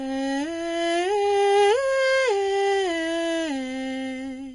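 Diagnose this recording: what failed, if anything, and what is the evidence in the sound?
Codec stage: the music was likely transcoded between lossy codecs. A spectrogram shows a flat ceiling at 10.6 kHz throughout, and the first coder's artefacts are heard together with the second coder's own. This fits a 32 kbit/s Vorbis pass re-encoded as 64 kbit/s WMA, which cannot restore the lost band.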